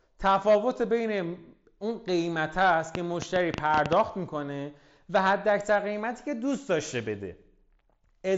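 From 2.95 to 3.94 s a train of clicks rides over the speech: about ten pops at an uneven pace, roughly 8 per second, peaking about 15 dB above the signal, likely from interference or a faulty connection or power supply. The waveform shows narrow spikes; the spectrogram shows thin vertical broadband lines.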